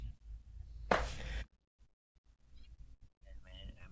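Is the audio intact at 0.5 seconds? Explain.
Yes, the speech at 0.5 seconds is intact, with no audible dropout, distortion or other fault at that moment.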